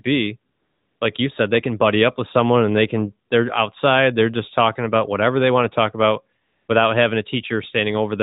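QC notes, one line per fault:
0.52 to 1.00 s, AMR comfort noise: the phone judged this a pause and sent no speech for 480 ms, so smooth synthetic hiss stands in until "like you said they".
6.42 to 6.68 s, AMR comfort noise: after "want to talk about" speech frames stop for 260 ms, and steady generated noise switches in before "without having a".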